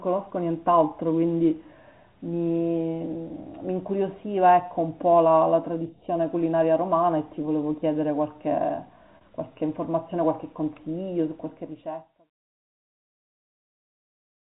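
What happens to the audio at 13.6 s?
Nothing goes wrong at 13.6 s: the audio is intact there, already quiet after a deliberate smooth fade-out, with no click or hard edge.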